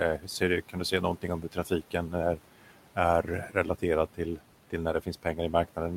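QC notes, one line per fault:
Throughout: noise suppressor artifacts. The suppressor pulls down the bands it judges to be steady noise by about 12 dB, deciding frame by frame. The room noise, which sits about 20 dB below the speech, therefore drops away in the gaps and comes back up under the voice, so the background pumps with the speech rather than holding steady.
0.18–0.41 s and 1.42–1.71 s: speech cut by the noise suppressor. Both times the suppressor treats quiet speech energy as noise and turns it down together with the background. The deepest drop is about 10 dB in the first stretch and about 9 dB in the second. The first comes just before "kan du säga någonting", and the second falls between "du säga någonting om" and "är är". Roughly a tenth of a second of sound in each stretch is swallowed, and the soft edges and low-level sounds there come out faint or go missing.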